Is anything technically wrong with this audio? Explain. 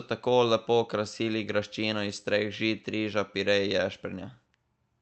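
No, nothing in this speech clip is technically wrong. It has the band-limited sound of a normal call path, with no content above about 8 kHz, which fits Opus coding at a moderate bitrate.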